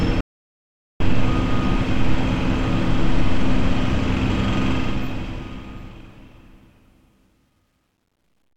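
At 0.21 s the sound cuts out abruptly and stays in audio dropout to silence until 1.00 s, losing about 0.79 s. The gap is silent with no room tone underneath, which sets it apart from a quiet passage or a heavy noise gate, where some floor would remain. The most likely cause is a lost input signal, such as a disconnected device or a failed link, while the recorder kept writing silence.

From 4.72 s to the end at 8.56 s, the fade-out suffers truncation distortion on a fade. As the level drops, though, the tail turns grainy, worst from 6.34 s to 8.57 s. That fits a gain stage holding only about 11 bits with no dither, so the quietest part of the waveform collapses into coarse steps. Dithered quantisation would leave a steady hiss instead, and a codec would smear the sound rather than chop it.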